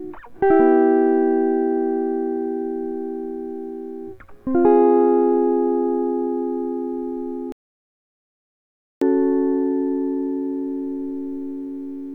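At 7.52 s the music cuts off abruptly and falls to silence, with no room tone beneath it, until it resumes mid-flow at 9.02 s. That is an audio dropout to silence lasting about 1.5 s, likely from the input being lost while the recorder kept writing silence.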